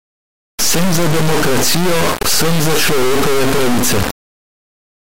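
From start to finish, this speech is ruined by an integer read as float fault: 32-bit integer samples interpreted as 32-bit floats swing between near-zero and far-over-full-scale values. It sounds like a harsh, blaring square-wave buzz that collapses to silence in quiet gaps. The waveform shows slabs pinned at the rails, and the spectrogram shows broadband energy.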